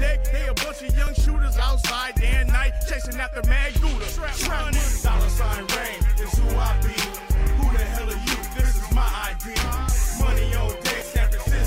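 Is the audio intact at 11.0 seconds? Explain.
No, an overlap between stream segments at 11.01 s, likely from 2-second segments, drops a few milliseconds, giving a tiny skip: a waveform jump and a thin vertical spectrogram line.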